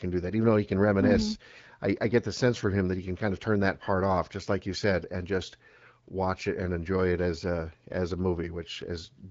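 Speech recording with no technical faults to report.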